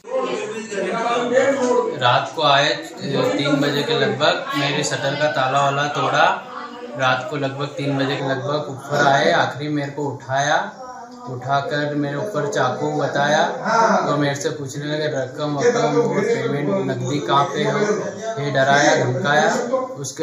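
From 8.20 s through to the end, the sound turns hollow. This is channel delay (comb filtering): one channel runs late by a fraction of a millisecond, around 0.2 ms, and when both are summed to mono the shared content cancels at evenly spaced frequencies, the first notch falling near 3 kHz. Unlike flanging, these notches stay fixed rather than sweeping, and unlike simple low-pass dullness, energy returns between the gaps.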